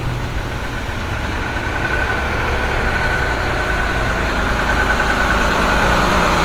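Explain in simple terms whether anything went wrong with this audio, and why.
The audio was likely squeezed too hard by Opus compression, so from start to finish the sound turns grainy, rough and noisy while keeping its full brightness.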